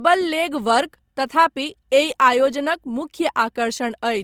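From start to finish, the speech was likely encoded first at a low bitrate and then re-saved at a high one, which is low-bitrate audio saved at a high bitrate. The artefacts point to roughly 24 kbit/s Opus that the 256 kbit/s MP3 cannot restore, with nothing above 20.3 kHz.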